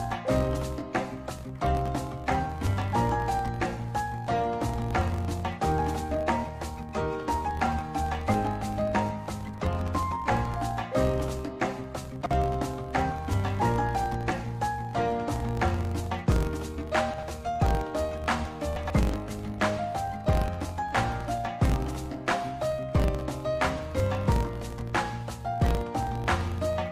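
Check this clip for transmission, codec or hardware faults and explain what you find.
Two faults are present: a filter restarted on every block, running through the whole clip, and chunks out of order at three separate moments.

Filter restarted on every block, throughout: a filter loses its state at each block boundary and starts every block from silence, so each block opens with a small transient. The ticks repeat at 46.9 Hz, which fits a 1024-sample block, and blur into a low buzz. The buzz rises and falls with the level of the sound.

Chunks out of order, at 12.21 to 12.31 s, 17.14 to 17.23 s and 18.76 to 18.90 s: short chunks of about 46.44 ms play later than they should. In the first two places one chunk appears to trail a single position behind its place, and in the third it is two. Nothing goes missing, but each reordering leaves three hard joins, so each of these moments sounds jumbled.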